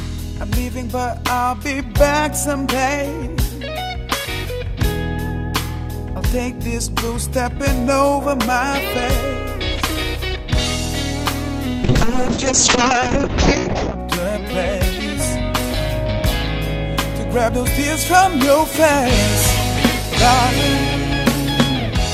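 From 11.85 to 14.05 s there's a call bitrate drop: the audio goes rough and muffled, which fits the encoder falling from about 48 to 6 kbps and losing everything above 8 kHz.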